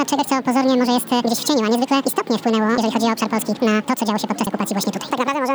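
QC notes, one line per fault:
Throughout: audio read two samples at a time (double speed). Sample pairs are taken as single frames. Everything plays 2x fast, an octave up.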